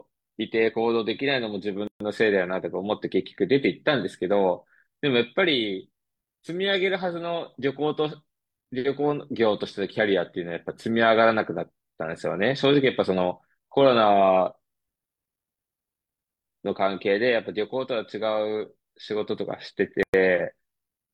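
Gaps at a join of encoded pieces break this speech clip twice, at 1.87 to 2.00 s (about 130 ms) and at 20.03 to 20.14 s (about 108 ms). Each piece went through the encoder separately and was joined without trimming, so the encoder's start-up delay and the padding of the last frame both remain as dead air. The silences have their edges smeared by the codec, and the speech resumes exactly where it stopped.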